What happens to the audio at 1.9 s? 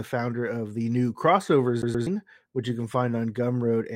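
Right after "of the new crossover", from 1.82 to 2.07 s, the CD gets stuck on one turn: the laser keeps jumping back, so a 0.12 s slice plays twice with tiny mutes, before "which you can".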